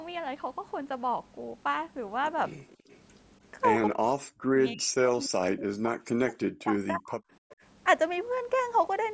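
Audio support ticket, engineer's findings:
Echo leak, 2.68–2.98 s and 7.5–7.56 s: faint delayed copy of the talker, about 0.3 s behind. Likely the far end's echo canceller letting loudspeaker pickup through.

Background gated by the echo canceller, 2.77–2.89 s: room tone ducks by about 16 dB for roughly a tenth of a second. The canceller clamped the mic while the speaker played, then released.

Speech suppressed in double talk, 3.94–7.23 s: talker's level sinks very deep for about 3 s while both ends talk. Likely the canceller couldn't separate the talker from echo and attenuated everything.

Call mic processing is in the chain, with nothing above 8 kHz.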